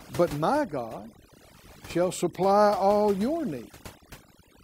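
Overdone noise removal runs throughout, with frequency bands near the noise estimate cut hard, leaving near-silent gaps with twinkling specks and quiet parts of the voice cut away with them.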